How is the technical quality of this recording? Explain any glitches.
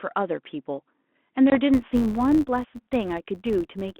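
The recording has two glitches on top of a narrowband telephone channel limited to roughly 200 Hz to 3.5 kHz, consistent with 32 kbit/s G.726 ADPCM, which adds light coding grain.

Packet loss on an ADPCM call occurs at 1.50 to 1.59 s. About one packet, roughly 20 ms, drops out and is filled with silence, leaving a hard-edged hole. The decoder's adaptive predictor and step size then disagree with the sender's, so the speech comes back with brief, slight distortion.

A filter restarted on every block runs from 1.74 s to the end. Each block starts from an empty filter state, which fits a 512-sample buffer, so every block begins with a small transient. Together these form a steady tick or buzz near 93.8 Hz that rises and falls with the speech level.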